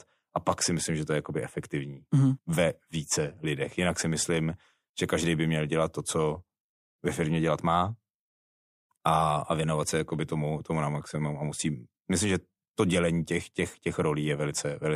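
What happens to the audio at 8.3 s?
Nothing goes wrong at 8.3 s; the speech there plays through intact, with no dropout, click, glitch or other audible fault.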